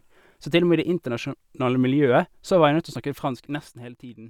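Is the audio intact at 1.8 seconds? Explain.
Yes, the speech is intact at 1.8 seconds, with no audible fault at that moment.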